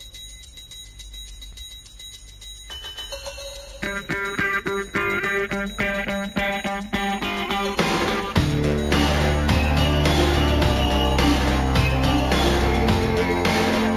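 Throughout the clip there is imaging from linear upsampling: the rate appears to have been raised by straight-line interpolation, which fits a 16 kHz source converted to 48 kHz. The top of the band is dulled, and faint mirror images at roughly 25 dB below the signal fill the 8 to 16 kHz range, adding a light metallic shimmer.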